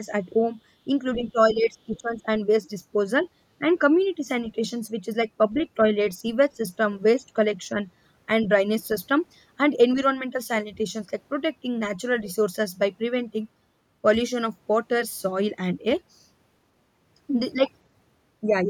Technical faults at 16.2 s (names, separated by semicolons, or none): none